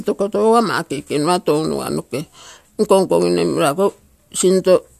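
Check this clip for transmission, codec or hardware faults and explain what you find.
Listening to the speech here, nothing stood out that would point to trouble in transmission, encoding or the hardware chain.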